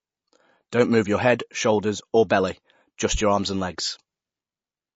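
Speech that sounds dull and watery throughout, with nothing at all above about 7.7 kHz, so s sounds lose their edge and a swirling, chirpy texture hangs around the voice as quieter detail flickers in and out. The likely cause is MP3 compression at a low rate. A hard treble cutoff like this, plus plainly audible codec damage, fits an encode of around 32 kbps, where the encoder discards the top band and zeroes weak frequency lines frame by frame. At 2.29 s, just after "shoulders or", a brief hiss of about 12 ms smears in ahead of the next sharp onset, so the attack arrives soft. That is pre-echo: the codec spreads noise scaled to the loud attack across its whole transform block, and the part of that block before the onset was nearly silent, so the noise shows there.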